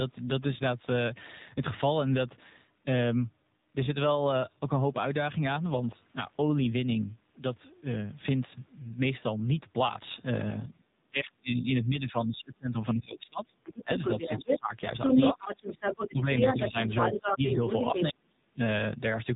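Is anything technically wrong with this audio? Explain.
Yes. AMR narrowband mobile codec, throughout: the speech is buzzy and synthetic, and nothing above 3.8 kHz survives, so a spectrogram shows an empty band above that line, which fits AMR-NB's 8 kHz sampling.

Speech suppressed in double talk, at 10.77–13.52, 13.83–14.7, 15.07–15.72 and 16.11–18.58 s: the echo canceller likely mistook talker for echo and turned it down, so the speech dips by up to about 30, 20, 10 and 35 dB, appearing as sudden holes in the waveform envelope.

Other side's voice leaking through, at 10.83–10.87 s (about 35 dB below the speech) and 13.64–14.59 s (at about speech level): echo the canceller likely missed appears as a second, overlapping harmonic pattern on the spectrogram.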